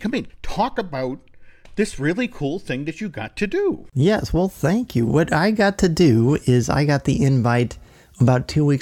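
No dropouts, clipping, glitches or other technical faults can be heard anywhere in the recording.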